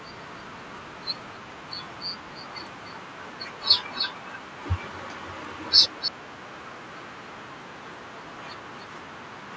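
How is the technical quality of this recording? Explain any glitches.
The speech carries an audible echo leak in two stretches, from 2.39 to 4.57 s and from 4.91 to 6.12 s. A faint copy of the speech trails it by 300 ms, about 15 dB quieter. The likely cause is a loudspeaker on one side of the call whose echo canceller let some pickup slip back into the call.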